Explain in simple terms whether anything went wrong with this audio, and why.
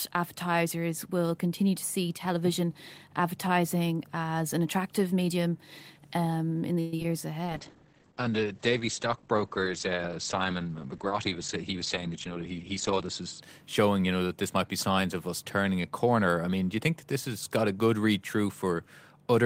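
Several things went wrong in this speech.

Call audio freeze (6.80 to 6.94 s): packets were likely held up, so the receiver stretched the last sound into a fading buzz for about 0.12 s, right after "attractive medium um in".

Short concealed packet loss (6.97 to 6.99 s and 7.03 to 7.05 s): tiny pieces of audio never arrived, and the receiver patched each hole, leaving brief smears or wobbles.

Call bitrate drop (7.46 to 13.48 s): the connection seemed to weaken, so far less detail was sent. The voice turns rough and muffled, with nothing above 8 kHz, until just before "showing you know that".

Jitter buffer speed-up (11.38 to 13.05 s): too much audio had piled up, so the receiver trimmed tiny slices, about a tenth of a second in all. Speech runs 6% faster at the same pitch.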